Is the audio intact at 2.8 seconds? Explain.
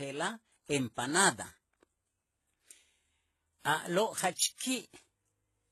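No. At 2.8 seconds, as throughout the speech, transcoding between lossy codecs is audible, likely a chain ending in low-bitrate HE-AAC. Layered swirly, smeared artefacts pile up, and a spectrogram shows a hard ceiling with nothing above about 12.3 kHz.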